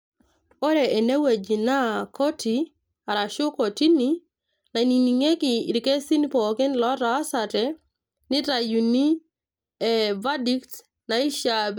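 Listening through the recording of speech, nothing stood out as a technical problem at any point.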